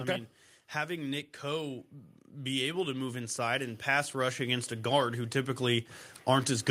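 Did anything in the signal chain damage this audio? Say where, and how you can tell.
Yes: automatic gain rising in call processing, from 0.86 to 6.57 s, lifts speech and background together by about 11 dB; the waveform envelope and spectrogram noise floor climb steadily.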